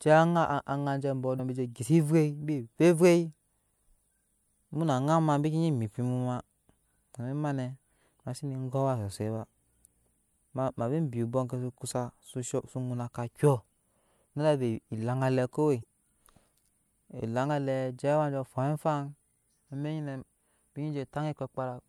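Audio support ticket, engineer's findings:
Damaged data in the compressed stream: corrupt frames at 1.36 s and 15.81 s, each about 40 ms. Decoder misreads the bad frames, loses sync, hunts for the next frame header. Heard as a short chirp or blip interrupting the speech.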